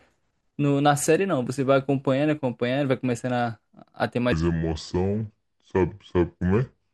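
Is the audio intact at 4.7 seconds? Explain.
No: a section at the wrong speed runs from 4.32 to 6.93 s, playing at 0.68x, likely from a clock mismatch, so the speech drops about seven semitones and drags.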